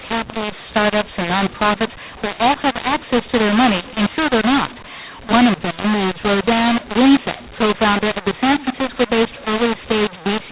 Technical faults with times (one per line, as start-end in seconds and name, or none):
0.00-10.52 mu-law and A-law mixed up